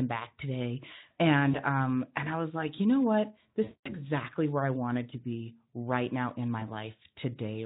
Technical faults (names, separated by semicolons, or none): VoIP packet loss concealed by the speech codec